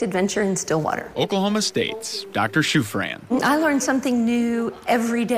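From 1.28 to 3.03 s the sound turns grainy, with a gritty edge that tracks its level. The likely cause is low bit depth without dither: truncation to about 9 bits leaves error roughly 40 dB under the signal. The waveform shows visible stair-steps, and the spectrogram shows a signal-dependent noise haze.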